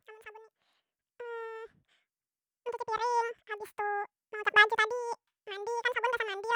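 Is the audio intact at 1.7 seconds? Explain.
No. At 1.7 seconds the speech is affected by a fault that runs through the whole clip: the audio read two samples at a time (double speed). Pairs of samples are taken as a single frame, so playback runs at 2x speed and an octave higher. On a spectrogram, formants and harmonics sit at twice their normal height. The waveform looks squeezed to half its length.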